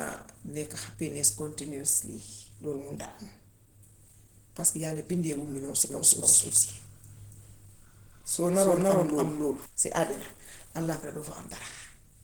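From the start, the speech carries plainly audible Opus compression. It sounds hoarse and grainy, with a muffled edge, which points to the hybrid speech mode at a low rate near 16 kbps. Bandwidth stays full, reaching about 20 kHz. Lossy encoding is the likely cause.

From 5.9 s to 9.66 s there is a doubled audio track. A second copy of the speech trails by about 0.3 s, at roughly equal loudness. It has no room tail. It starts and stops abruptly, ending just before "si àddina allaaxira doo".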